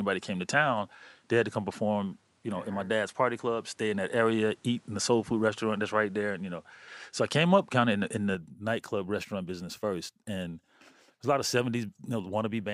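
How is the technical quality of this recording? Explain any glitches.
The technical quality is uneven: the first part sounds duller and slightly noisier than the rest. From the start to 8.35 s the audio has no content above about 11.4 kHz, a faint added hiss roughly 40 dB under the speech, and a level about 5 dB different. At 8.35 s, just before "nightclub restaurant business first", the sound opens up with no gap. This is likely an input switched to a poorer device, a narrower-band microphone, before the system moved back to the better input.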